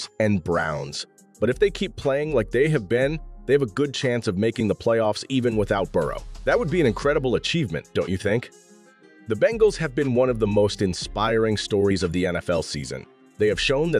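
No technical faults can be heard anywhere in this audio.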